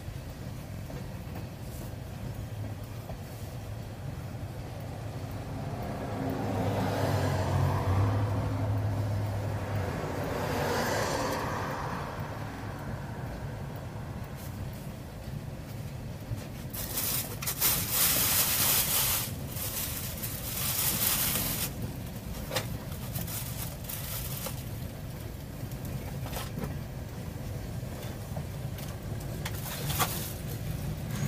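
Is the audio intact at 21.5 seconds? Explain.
No. From 21.46 to 21.55 s there is a repeated buffer. New audio failed to reach the output in time, so the device replayed the last block it had, a 46 ms chunk that fits a 2048-sample buffer, two extra times. The same short fragment therefore sounds three times in a row, with a hard join at each restart, giving a brief stutter about 0.09 s long. Essentially no audio is lost; the material is delayed and repeated rather than cut.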